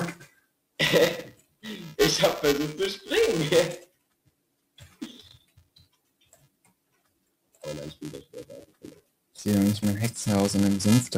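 From start to finish, a noise suppressor applied to music or sounds is running on material it was not designed for. It treats steady, sustained content and decay as noise, so the level swings by roughly 5 dB as the processing clamps and releases. Onsets come through largely intact, while held portions sink, giving a pumping and thinning across the whole clip.

Also present throughout is buffer tearing. The buzz sits at 375 Hz, which fits a 128-sample buffer whose writer and reader have drifted until they cross within each period. A small slice of every buffer, a few percent, carries audio from about 10 ms earlier, spliced in with hard edges at both ends. The result is a steady robotic rattle that appears only while sound is playing.

At five points the suppressor cuts the sound much harder than elsewhere: 0.19 to 0.79 s, 1.33 to 1.64 s, 3.84 to 5.02 s, 5.34 to 7.63 s and 8.66 to 9.38 s. 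The deepest drops reach about 19 to 21 dB. The longest, from 5.34 s, affects around two seconds of material. In each span, sustained sound and tails are pulled down or truncated while sharp transients survive.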